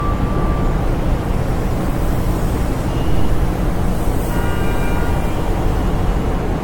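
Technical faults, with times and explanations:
Throughout, generation loss: the audio sounds swirly, smeared and hollow, with blurred attacks and nothing above 17 kHz. The damage is worse than a single low-bitrate encode would cause. It fits four or so AAC-LC passes near 96 kbit/s, likely each requantising on a shifted frame grid.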